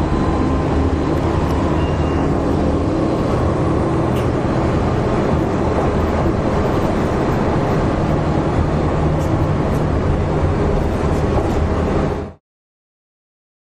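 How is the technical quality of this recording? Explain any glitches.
The technical quality of this recording is sound, with no glitches to explain; the level simply fades out smoothly from around 12 s to 12.41 s.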